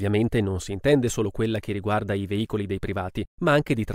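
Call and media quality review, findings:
No audible faults found in this speech recording.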